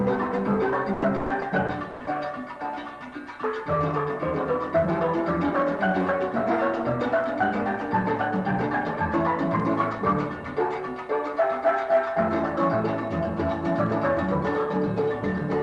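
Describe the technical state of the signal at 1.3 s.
At 1.3 s the audio is inside a stretch of repeated packet loss (robotic sound), from 0.93 to 2.09 s. Six gaps, the longest 100 ms, are patched by stretching the last sound. The result is choppy, with pieces missing.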